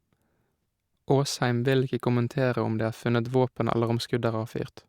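No technical faults can be heard anywhere in the speech recording. There is nothing in it that calls for a time mark or a description.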